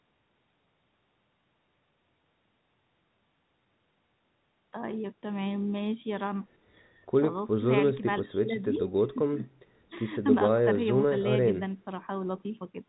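Nothing goes wrong anywhere in this speech clip; it simply has the familiar narrow sound of an ordinary landline telephone call.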